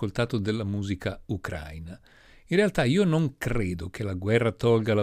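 No dropouts, clicks, distortion or timing glitches turn up anywhere in the recording.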